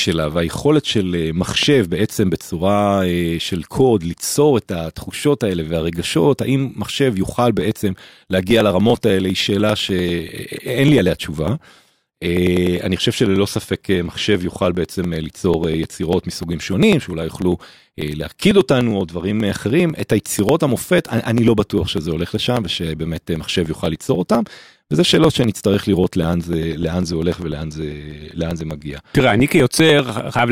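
A sudden voltage pulse, likely from a plug, switch or static discharge, entered the signal at 1.63–1.65 s. The result is a single loud pop, peaking about 10 dB above the speech, which carries on beneath it without interruption.

From 7.61 s to 30.39 s, periodic USB or driver dropouts appear: something blocks the audio path every 0.099 s, and roughly a millisecond of speech is skipped each time. This produces a steady run of ticks, about ten per second, heard only while speech is present.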